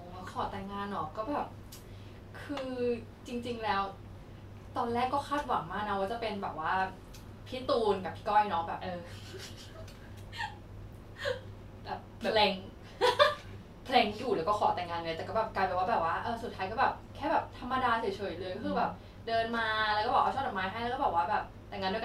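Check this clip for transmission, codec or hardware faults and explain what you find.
Nothing in the speech points to any such fault.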